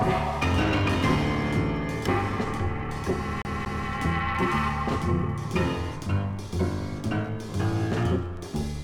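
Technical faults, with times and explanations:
3.42–3.88 s, CD stuck on one turn: a 0.23 s slice of audio plays twice with a brief mute at each jump, the quick even stutter of a disc skipping.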